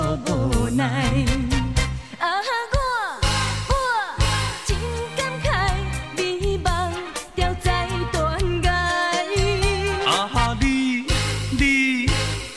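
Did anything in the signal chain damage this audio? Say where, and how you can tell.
No, nothing in the signal chain stood out as damaging this audio on listening.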